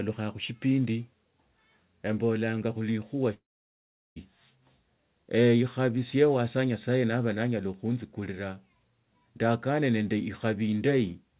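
At 3.34 s the speech cuts out until 4.18 s, with nothing above 4 kHz throughout from the call path. It's likely a long network dropout: the last sound smears into a fading buzz, then about 0.74 s of near silence, and the speech resumes with that stretch gone.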